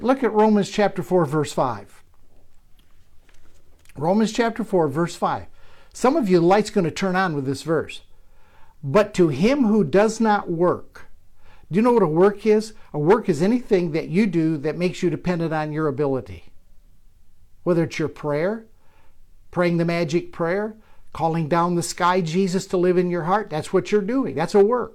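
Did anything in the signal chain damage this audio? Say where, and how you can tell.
No, nothing along the chain from capture to playback has audibly damaged this speech recording.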